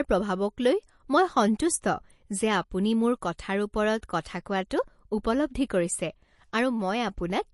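Compression damage, likely from MP3 encoding, runs through the whole recording. Nothing is left above 11.3 kHz, and the starved encoder drops weak frequency components frame by frame, leaving the speech plainly watery and swirly, which fits a low bitrate around 48 kbps.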